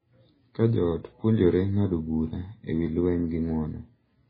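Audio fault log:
Throughout: MP3 compression, heavy, likely from a low bitrate near 16 kbps; nothing above 5 kHz, and the watery, swirling texture separates it from plain low-pass filtering.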